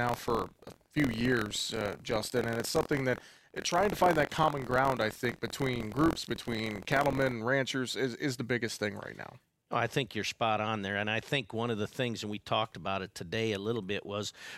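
A speech recording with buffer tearing from the start to 7.36 s, ending just before "and ranchers is is". A steady robotic rattle at about 43 Hz rides on the voice, which fits a 1024-sample buffer. Inside each period a small slice, a few percent, is replaced by audio from roughly 50 ms earlier, joined hard on both sides. Unlike dropouts, nothing goes silent, and the rattle is heard only when there is signal.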